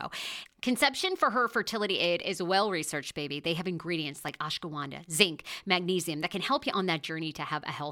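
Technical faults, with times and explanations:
4.29 s, block of digital silence: the speech drops to silence for about 0.67 ms, which fits a 32-sample block left unfilled, and jumps straight back with no fade. The two hard edges merge into a single tick, not an audible gap or a muffled fade-out.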